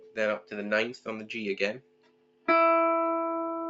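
A speech-tuned noise suppressor applied to music or sounds runs throughout the clip, treating held, steady parts as noise, so the level swings by around 10 dB. Sound cut by the noise suppressor is clearest from 0.0 to 0.17 s and from 1.8 to 2.47 s, where sustained material sinks by about 12 dB.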